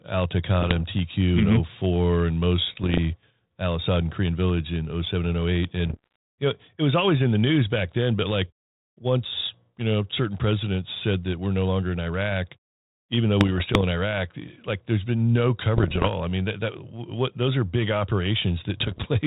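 Bursts of bit errors on an ADPCM link hit the speech at 0.61–0.84 s, 2.72–2.98 s, 5.86–6.16 s, 13.40–13.83 s, 15.76–16.14 s and 18.80–19.18 s. The error rate sounds like roughly half a percent to one percent. Each flipped bit throws off the decoder's step size and predictor, so the damage rings on briefly as pops, rough crackle and short level jumps. The link's band-limited sound fits 32 kbit/s G.726. On a waveform these show as spiky, uneven bursts. A spectrogram shows broadband vertical smears capped near 4 kHz.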